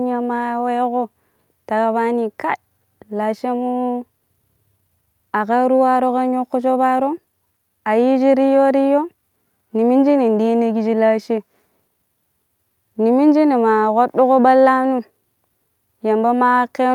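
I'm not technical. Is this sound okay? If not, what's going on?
Yes, this one's fine; there's nothing wrong to hear anywhere in it.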